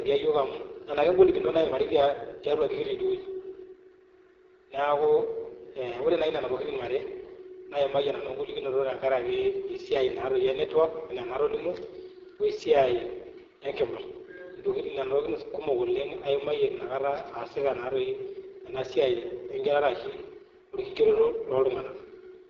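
From start to finish the speech sounds rough and raspy, with a buzzy, grainy edge on every syllable and a dull top end where nothing is heard above about 7.6 kHz. This is heavy AMR wideband (HD Voice) codec damage. The codec rebuilds the voice from a pulse-excited vocal tract model and fills the highest band with shaped noise. The coarse, gritty texture fits its lowest mode, around 6.6 kbit/s, where too few bits remain to model the voice faithfully.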